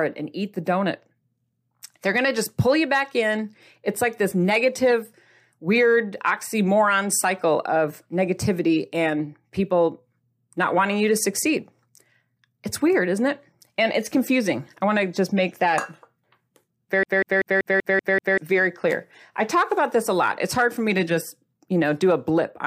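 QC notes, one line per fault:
17.03–18.38 s, CD stuck on one turn: the speech stutters fast and evenly, one 192 ms fragment repeating seven times with brief mutes, as the laser keeps jumping back a track.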